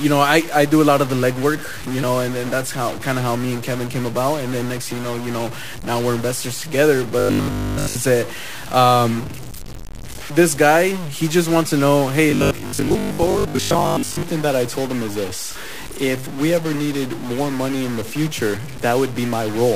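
Speech recording with distortion throughout and noisy pauses, likely from a stuck bit that shifts about half the sample values by a fixed amount. Between 7.19 and 7.95 s, and again from 12.31 to 14.23 s, the voice turns into a rigid metallic buzz at 50 Hz. This is robotic sound from repeated short buffers, likely caused by audio arriving too slowly, so a 20 ms chunk is looped in place of the missing material. The first stretch is almost entirely repeats, and the second is about 70 percent repeats.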